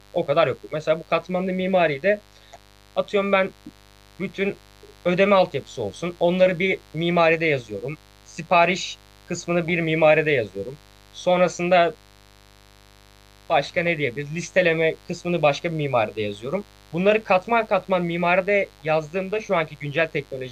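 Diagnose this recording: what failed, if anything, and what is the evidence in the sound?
Mains buzz sits under the speech for the whole clip, a steady raspy tone at roughly 30 dB below the signal. It is an analogue wiring fault: a dimmer, rectifier or poor shield injects switching spikes twice per 50 Hz cycle, spraying harmonics into the kilohertz range.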